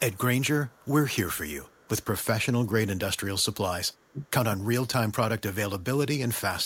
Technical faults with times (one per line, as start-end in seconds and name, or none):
0.13-0.18 echo leak
0.67-0.89 echo leak
1.65-2.05 echo leak
3.92-4.11 echo leak
4.11-4.35 speech suppressed in double talk